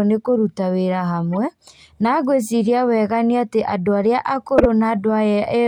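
Two short bursts of corrupt frame decoded show up in this speech. The first runs from 1.33 to 1.37 s, a quieter burst peaking around -20 dBFS. The second, from 4.58 to 4.66 s, is much louder, peaking around -5 dBFS. Each looks like a couple of damaged compressed frames that the decoder played anyway, so misread values dumped energy into the wrong frequencies and you get a chirp, squeak, blip or burst of noise.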